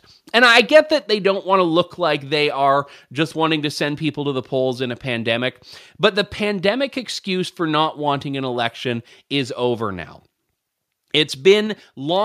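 From 0.43 to 0.78 s the loudest peaks have their tops flattened with a harsh, crackly edge. This is microphone overload, likely from input gain set high enough that peaks ran about 4 dB past the converter's ceiling, clipping a small fraction of samples.

At 1.02 s, just before "they don't want to", and again at 11.67 s, the speech and background both drop abruptly by about 3 dB. These are microphone volume step-downs, likely the call software cutting the device's input gain in one step after detecting excessive level.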